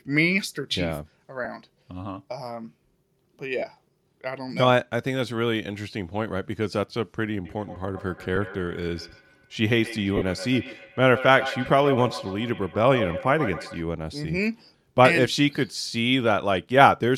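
Lost LE Audio frames first appear at 1.44–1.46 s and again at 3.58–3.62 s. When frames vanish, the LC3 decoder refills the gap by repeating the last spectrum with scrambled phase signs. The sound briefly turns into a hissy smear. On a spectrogram this shows as a short vertical band of noisy texture where harmonic lines should be. The 15 ms and 37.5 ms gaps fit two and five 7.5 ms frames.

From 7.45 s to 13.86 s there is feedback echo between two devices. A second device in the same room replays this side's audio, and this side's microphone picks it up again, out of reach of the local echo canceller. Each phrase returns about every 150 ms, thinner and ringier with each pass, peaking about 10 dB below the direct sound. In the waveform, fading copies trail each burst at regular spacing. On a spectrogram they appear as ghost onsets with comb-like striping.

Within that echo, further frame losses fall at 8.36 s, a single 7.5 ms frame, and at 10.17–10.22 s, where 45 ms fits six frames.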